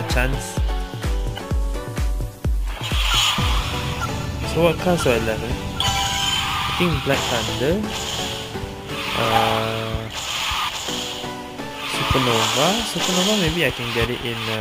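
From start to end the audio carries crude rate conversion, done by simply repeating the nearest sample, which fits a step from 32 kHz up to 44.1 kHz with no smoothing filter. The uneven repeats leave an error only some 20 dB below the sound, heard as a gritty, inharmonic fizz clinging to loud and bright moments. Unlike aliasing from a missing anti-alias filter, the grit keeps a steady, regular texture set by the rate ratio.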